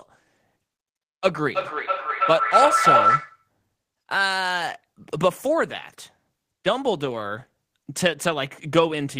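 From 1.55 s to 3.49 s, a feedback howl takes over the speech. Two devices in the same room are on one call. Sound leaves a loudspeaker, re-enters a microphone, and comes back louder each trip. The repeats grow instead of fading. They narrow to a tone around 1.5 kHz that pulses roughly every third of a second, matching the loop's delay. At its peak the howl sits about 5 dB above the speech. It stops when the loop breaks.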